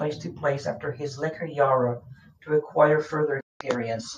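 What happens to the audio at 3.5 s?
A digital broadcast dropout cuts the speech there. From 3.40 s to 3.61 s the sound fades to silence within about 8 ms and stays muted for roughly 0.2 s. The receiver stopped getting usable frames, either through signal loss or failed checksums, so it muted its output. The gap fits about eight lost frames. When good frames resumed, the speech came back later in the programme. Whatever was sent during the gap is gone.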